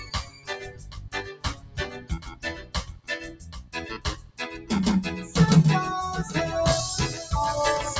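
A doubled audio track runs throughout: a second, full-band copy trails roughly 0.7 s behind at about 10 dB lower, dry and uncoloured, likely from a slower capture path.

Also throughout, a noise suppressor is applied to music or sounds. This speech-oriented suppressor treats sustained sound as noise, so level swings of about 15 dB make the audio pump and thin.

Sound is cut by the noise suppressor at 0.00–0.48, 0.67–1.12, 1.36–1.78, 1.97–3.08, 3.30–3.74 and 4.15–4.39 s. Held and fading parts sink by about 11 to 12 dB while onsets survive. The band tops out at 8 kHz from call microphone processing.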